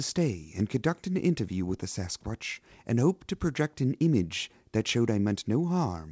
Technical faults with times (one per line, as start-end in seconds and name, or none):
none